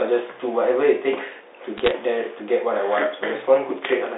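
From 1.77 to 1.91 s the speech picks up a short burst of crackle: bit errors on a digital phone line. Each flipped bit corrupts a single sample of the telephone coding. On a waveform these show as isolated one-sample spikes, and on a spectrogram as thin full-band vertical lines.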